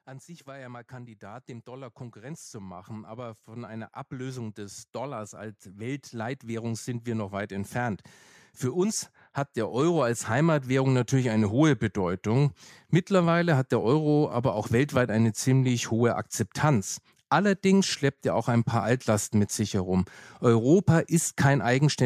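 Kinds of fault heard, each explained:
automatic gain rising: speech and background swell together by about 16 dB over 8 s, then about 5 dB more, as gain control lifts a quiet input.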